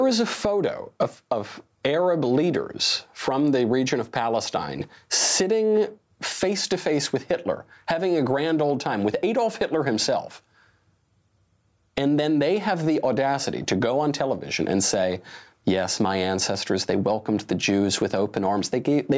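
From start to finish, the gain swings by around 20 dB. Loud and quiet passages sit unnaturally close in level, giving a flattened, squashed quality. This gain pumping is likely caused by input gain set far too high, with a fast limiter or compressor clamping down on each loud peak and letting go in the gaps. The call's band-limited top end, with nothing above 8 kHz, is normal for this path.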